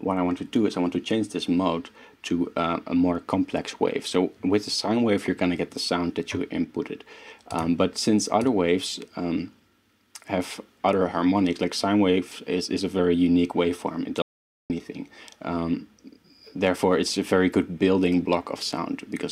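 At 14.22 s the sound cuts off abruptly and the clip falls into complete silence, with no room tone or background beneath it, until it resumes mid-flow at 14.70 s. This audio dropout to silence removes about 0.48 s of material outright. The likely cause is that the input signal was lost for that moment, through a disconnected device, a failed link or a stray mute, while recording carried on and filled the gap with silence.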